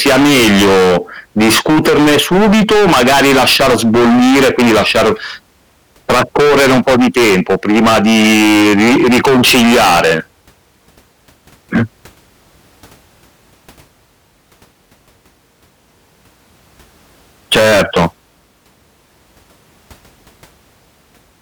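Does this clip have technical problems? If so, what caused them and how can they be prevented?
Yes. Hard clipping: the speech reached a stage at about 22 dB beyond its limit (about 10 dB at 11.75–11.83 s), flattening peaks into harsh fuzz at 0.00–0.98, 1.37–5.13, 6.10–10.18 and 17.52–18.06 s. Setting input gain so peaks stay below full scale prevents it.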